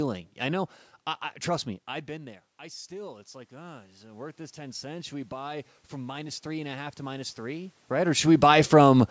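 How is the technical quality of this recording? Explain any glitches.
The recording has one clear glitch, automatic gain rising, from 1.63 to 7.8 s, starting just after "know I I trust". Around 1.5 s the talker moved away and the input fell by about 18 dB. The gain control then slowly added about 13 dB to compensate, so the speech and the room noise swell together over several seconds. On a waveform the envelope widens steadily across that stretch. A spectrogram shows the background noise floor brightening along with the speech.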